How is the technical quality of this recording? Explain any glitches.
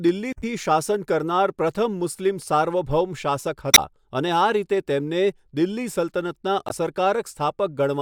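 The speech has three short glitches, all from damaged data in a compressed stream, at 0.33–0.44 s, 3.71–3.79 s and 6.67–6.71 s. Corrupted bytes make the decoder misread those frames and lose sync while it hunts for the next header, so each spot comes out as a brief chirp, squawk, click or short hole.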